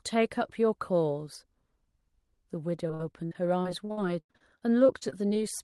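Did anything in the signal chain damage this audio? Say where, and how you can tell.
Yes. The damage happened on the network, as repeated packet loss with a robotic sound, from 2.87 s to 5.36 s. The speech turns choppy and robotic there. There are close to twenty short holes, the longest about 90 ms. Roughly a quarter of that stretch is patched rather than real. Each lost or late packet is covered by stretching the previous sound, and the next loss arrives before the speech recovers. The audio's top end stops near 12 kHz, which points to an Opus call codec.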